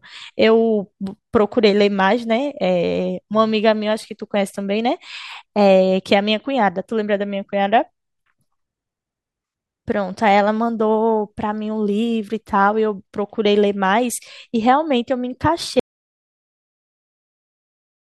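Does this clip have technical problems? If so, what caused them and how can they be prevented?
Yes. At 15.80 s the speech cuts off mid-flow into an audio dropout to silence that runs right to the end, with no room tone at all. That most likely means the input was lost, say a mic disconnecting or a mute getting hit, while the recorder kept writing. To prevent it, secure cables and wireless links, lock out mute controls, and keep an eye on input meters while recording.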